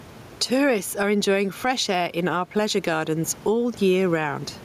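Across the whole speech clip there's gain pumping, swinging roughly 10 dB, with the room noise sitting about 30 dB under the speech. The likely cause is mic gain set far too high, with a fast limiter clamping each loud syllable, which leaves everything squashed.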